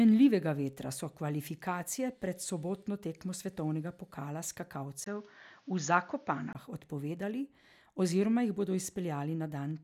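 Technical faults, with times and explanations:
5.04–6.55 s, input switched to a poorer device: the speech suddenly turns dull and boxy, losing everything above 7 kHz, with a brief 20 ms dropout at the switch and a new background noise about 35 dB below the speech. Loudness barely changes, and the full band returns at 6.55 s. This likely comes from recording moving to a narrower-band microphone. A spectrogram shows the upper band sliced flat at 7 kHz for this stretch; the waveform shows a thin gap at 5.04 s.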